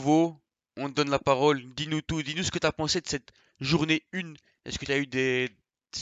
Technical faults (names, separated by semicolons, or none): none